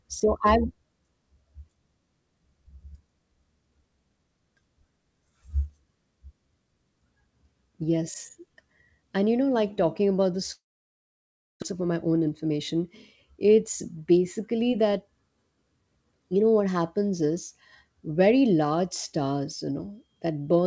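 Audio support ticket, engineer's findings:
Long network dropout, 10.52–11.64 s, right after "like talking about the": sound stretched into fading buzz, then about 1 s of silence. Likely packet loss on network path; receiver concealment extends last audio, gives up, resumes later with roughly a second of speech gone.

Jitter buffer speed-up, 11.71–12.51 s: speech runs about 9% fast, pitch unchanged, hurried. Jitter buffer over target; receiver trims short pitch-period segments repeatedly, shedding roughly 70 ms of delay. G.722 call path, nothing above 8 kHz.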